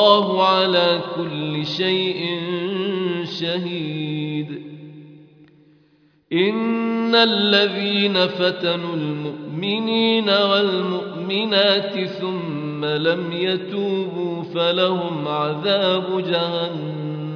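Listening closely turned up nothing that stood out as a technical problem at any point in the recording.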